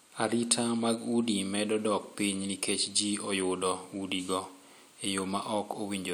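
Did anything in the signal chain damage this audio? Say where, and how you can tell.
No, nothing in this speech recording stood out on listening as damage from any stage of the signal chain.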